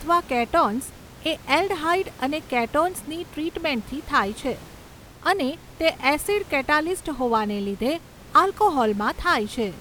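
No technical faults are present; the only background is the room's own noise, sitting about 21 dB below the speech.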